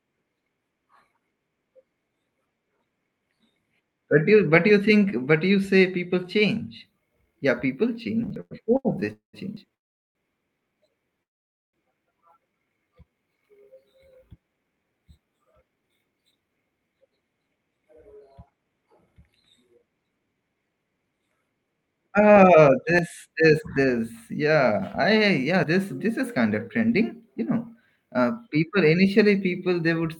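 From 8.23 to 9.72 s the speech breaks into repeated stalls (stutter): nine short holds, the longest 103 ms, together about 269 ms and roughly a sixth of that stretch. Packets were reaching the receiver more slowly than they were played out, so its jitter buffer kept running dry and it stretched the last sound each time. On a waveform the envelope shows small flat, repeating plateaus; a spectrogram shows brief horizontal smears where harmonics freeze in place.

Inside that stretch, at 8.36 s, a jump marks a dropped buffer (overrun), with roughly 50 ms of audio skipped. The same forward jump recurs at 9.57 s, where about 150 ms is lost, and later at 17.51 s (about 150 ms), 22.99 s (about 50 ms, just before "this this") and 25.64 s (about 50 ms). The likely cause is the capture software failing to collect samples before the hardware overwrote them. The two sides are spliced with no gap. A waveform shows an abrupt discontinuity, and a spectrogram shows a thin vertical broadband line with the spectral pattern changing across it.

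Three call audio freezes follow, at 9.13 to 9.35 s (207 ms, 130 ms of it silent), 9.74 to 10.17 s (408 ms, 400 ms silent) and 11.23 to 11.75 s (505 ms, 500 ms silent). Each starts as a short fading buzz and then goes quiet before the speech resumes where it left off, so nothing is missing but the audio now runs later. That is likely packets held up in transit. On a spectrogram each appears as a brief smeared tail fading into an empty band. The waveform shows a decaying ripple and then a flat line.

From 12.46 to 13.11 s a jitter buffer slow-down adds about 90 ms, so this passage plays at 87% speed with unchanged pitch. The receiver repeated single pitch periods to rebuild its reserve. The speech sounds drawn out. A spectrogram shows harmonics at the usual spacing but with features stretched in time. The waveform shows near-identical cycles repeated in runs.

A long jitter buffer speed-up runs from 14.48 to 21.75 s at 110% speed, removing roughly 0.7 s. 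A shorter one runs from 26.81 to 27.97 s at 106%, removing roughly 70 ms, between "is kind of" and "uh people initially". The buffer held more audio than its target, so short pitch-period pieces were cut. The speech sounds hurried at normal pitch. A spectrogram shows compressed syllables and pauses, and the waveform shows shortened gaps with slightly jumpy cycle boundaries.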